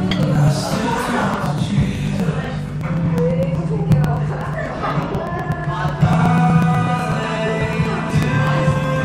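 From 0.11 s to 8.96 s the sound is broken by periodic USB or driver dropouts. Every 0.12 s a very short piece of audio, about 2 ms, is simply skipped, as if something were briefly blocking the bus or driver on a fixed schedule. The result is a steady train of ticks, roughly eight per second. On a waveform each one shows as a small discontinuity, and a spectrogram shows evenly spaced thin vertical broadband lines.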